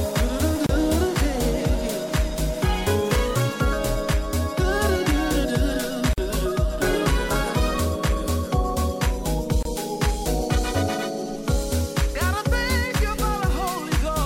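At 0.66 s, 6.13 s and 9.63 s the sound stops for about 29, 46 and 27 ms: gaps at joins of encoded pieces, where encoder start delay and final-frame padding were left in. Unlike a dropout, nothing is lost. Each silence has smeared edges, and the sound resumes exactly where it stopped.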